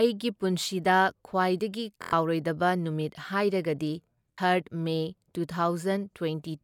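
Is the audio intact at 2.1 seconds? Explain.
No. A Bluetooth stutter runs from 2.02 to 2.13 s, right after "ꯄꯨꯟꯁꯤꯗ ꯈ꯭ꯋꯥꯏꯗꯒꯤ". Packets arrived late or not at all, so the receiver kept replaying its last short slice, a rapid buzzing repeat. Speech then resumes further on, about 93 ms skipped, which fits roughly four lost packets.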